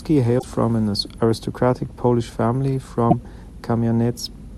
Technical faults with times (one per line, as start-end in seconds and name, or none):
0.38-0.44 damaged data in a compressed stream
3.10-3.13 damaged data in a compressed stream